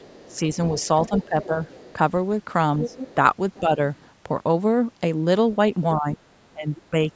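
From 0.0 to 1.93 s a faint second voice sits about 20 dB under the speech, the other side's voice leaking through, likely from loudspeaker echo the canceller missed. On a spectrogram it appears as weak harmonic traces between the main talker's bands. Overlapping it, 0.28 to 1.57 s shows speech suppressed in double talk, likely the canceller ducking both voices at once. Dips of up to about 15 dB, totalling around 0.4 s, carve notches into the waveform envelope. From 2.82 to 4.08 s the leak returns stronger, about 10 dB down, and between 3.15 and 3.79 s there is milder ducking of about 5 dB. From 5.95 to 6.96 s suppression is deepest, around 20 dB over roughly half a second. A brief echo scrap about 25 dB down sits at 6.77 to 6.82 s.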